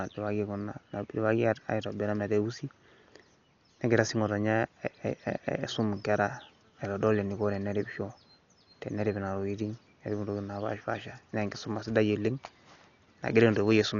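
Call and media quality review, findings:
Speech dull and band-limited for the full clip, nothing above 7 kHz; heavy, rough, fluttering noise clinging to voiced tones. Likely Dolby Digital compression, consistent with a starved stream of about 48 kbps. The encoder narrowed the band and left many frequency lines without mantissa bits, and the decoder filled those gaps with dither noise. Unlike a plain low-pass filter, this adds a noisy, unsteady texture around tones as well as removing the treble.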